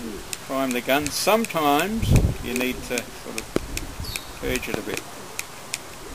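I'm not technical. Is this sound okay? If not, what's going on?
No. There are loud pops at 2.61 and 3.56 seconds, and a double pop from 4.74 to 4.96 seconds, likely from a plug, switch or static spike.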